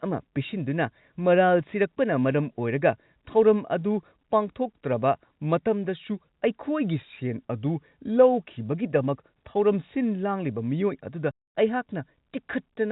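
Speech with one clear fault: packet loss filled with silence near the end, from about 11.31 s to 11.51 s. The audio just drops out for roughly 240 ms because the receiver had nothing to play and put in dead silence rather than concealing the gap. The edges are hard cuts. The hole's length fits a short run of consecutive 30 ms packets going missing. Over the G.711 telephone coding, the band stops at 4 kHz.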